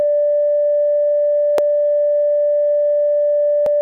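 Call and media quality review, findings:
Damaged data in a compressed stream at 1.58 s. Brief blip in the music. Decoder side. Corrupt bytes in a frame, so the decoder misreads it, loses sync and hunts for the next frame header.

Damaged data in a compressed stream again at 3.66 s. Same short blip. Same component. Another bad frame forces a resync, so the fault recurs rather than being a single glitch.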